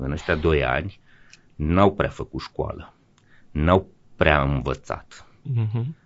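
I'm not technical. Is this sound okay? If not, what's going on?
No, the speech sounds rough and grainy from start to finish, likely from low-delay AAC compression, whose very short frames blur the voice's pitch detail, unlike steady background hiss.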